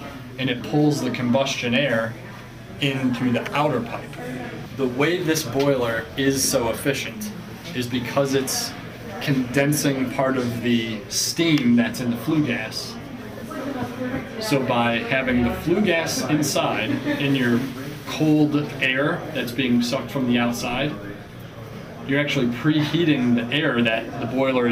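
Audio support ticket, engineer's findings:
Crude rate conversion, 1.89 to 5.58 s: resampler repeating nearest samples with no anti-imaging filter, consistent with 44.1 kHz to 48 kHz. Patterned error around 25 dB below the signal gives a gritty, inharmonic fizz tracking loud, bright sound.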